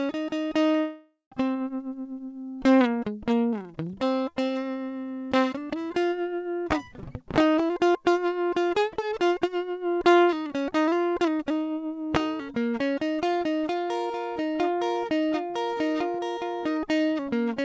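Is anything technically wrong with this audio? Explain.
Yes. From 0.80 to 1.34 s the music breaks up: the last sound is stretched into a fading buzz for about half a second, a short silence follows, and playback resumes with a chunk of the music gone. This is a long network dropout, most likely packets stopped arriving, so the receiver concealed the gap by extending what it had, then gave up, and around 0.4 s of audio was never played.

From 1.41 to 2.20 s the music rushes forward at about 113% speed while keeping its pitch, so the tempo briefly loses its steadiness. This is a jitter buffer speed-up: after the dropout, delayed audio piled up in the buffer, and the receiver cut out many tiny pitch-period slices in a row to shed roughly a tenth of a second of extra delay. The call path itself, which sounds like G.722 at 64 kbps, has nothing above 8 kHz.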